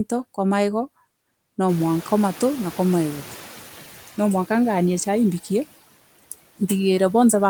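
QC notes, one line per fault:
Throughout: noise suppressor artifacts. The suppressor cuts the bands it judges to be steady noise by about 14 dB, frame by frame. So the background drops in the gaps and comes back up under the talking. It pumps with the speech.
1.68 to 3.92 s: noise suppressor catching up. The room noise jumps by about 18 dB around one and a half seconds in. The suppressor's noise estimate lags, cutting only about 8 dB at first. It needs 2.24 s to adapt before the noise sinks again.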